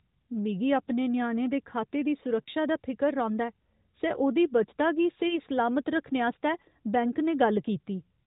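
Speech over the AMR narrowband mobile codec, band-limited below 4 kHz, has lost AMR speech frames at 2.42–2.49 s after "ञ्याणे दे खाते दी" and 5.28–5.39 s after "सै ओह्दी बचता गी". The first gap fits two 20 ms frames and the second fits one. Unlike a hard dropout to silence, the decoder stretches the last sound with fading gain, giving a brief warble, and then recovers rough for a moment.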